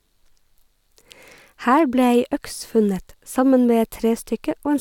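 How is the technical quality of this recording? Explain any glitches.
No technical faults can be heard in this speech recording. There are no glitches to explain.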